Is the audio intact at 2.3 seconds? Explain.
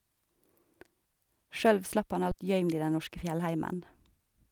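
No. A skip ahead at 2.31 to 2.33 s discards roughly 0.7 s of queued speech, and playback jumps forward, joining both sides almost directly without any gap.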